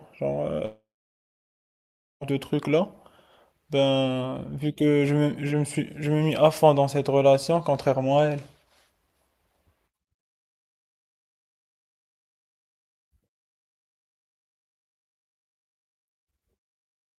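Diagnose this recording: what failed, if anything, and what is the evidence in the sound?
Likely a long network dropout: at 0.65 s the speech decays into a fading buzz or hiss, then silence, and resumes at 2.23 s with 1.56 s missing.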